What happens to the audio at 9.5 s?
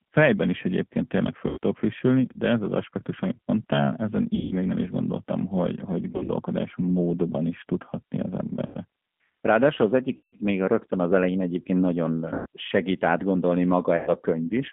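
G.729 codec damage is present at 9.5 s, as it is across the whole clip. The speech has been reduced to a vocal tract filter, a pitch predictor and a few pulses per short frame, then rebuilt, which fits an 8 kbit/s G.729A link. The band is confined to roughly 150 Hz to 3.5 kHz, so it sounds thin and telephone-like, and the plainly audible coding leaves the speech rough and synthetic.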